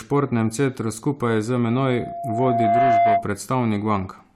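Loudspeaker feedback squeal runs from 1.66 to 3.29 s: the microphone is picking up its own loudspeaker, and at 690 Hz the loop gain passes one, so a pure tone swells over about a second until it sits roughly 5 dB above the speech.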